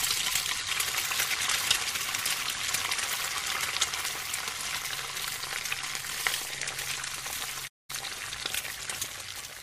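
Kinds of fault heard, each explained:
Playback stall: the sound stops dead at 7.67 s and stays silent for about 210 ms before going on at 7.90 s, likely because the player ran short of data or was blocked; unlike a brief dropout, the silence is long and complete.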